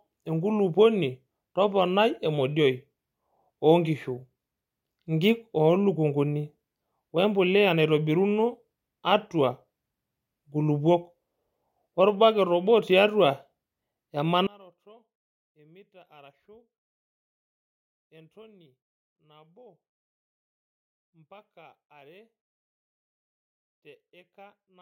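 From 14.47 s to the end, the speech falls by about 31 dB in mono, leaving only a faint residue. The likely cause is one channel inverted: one stereo channel has reversed polarity, so the centred speech cancels when both are summed.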